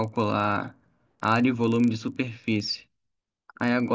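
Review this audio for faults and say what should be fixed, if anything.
There's a steady rough buzz riding on the speech all the way through, ticking at 25 Hz and dropping away in the pauses. That's the resampler restarted on every block: the conversion from 44.1 kHz down to 16 kHz ran on 40 ms chunks independently, so each chunk's edges were filtered against silence or its own far end instead of the real neighbouring samples. That leaves a small error at every boundary. To prevent it, keep one resampler instance running across blocks so its filter history carries over from chunk to chunk.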